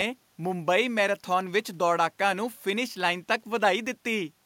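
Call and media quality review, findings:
No system faults found in the speech; the only background is the recording room's own noise, sitting about 43 dB below the voice, which belongs to the acoustic environment rather than to any part of the call or media chain.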